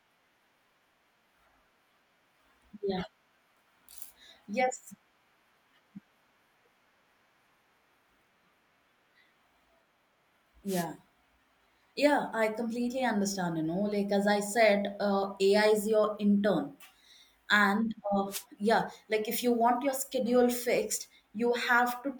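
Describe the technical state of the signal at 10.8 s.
A wireless microphone noise hit runs from 10.66 to 10.86 s. The analogue FM radio link fades briefly as reflected signals cancel, letting receiver noise rise over the speech and heard as a short 0.2 s swish of static.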